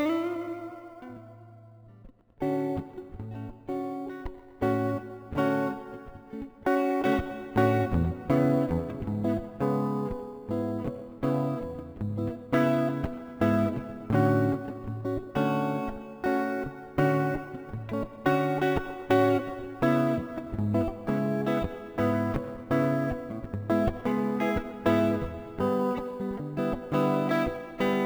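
Throughout the recording, imaging from sample-and-hold upsampling adds a bright metallic fizz. Each sample was repeated without smoothing, so a mirrored spectrum about 28 dB down fills 11.03 to 22.05 kHz, which fits a source rate near 22 kHz. On a spectrogram it appears as a faint reflection above 11 kHz, and on a zoomed waveform as staircase steps.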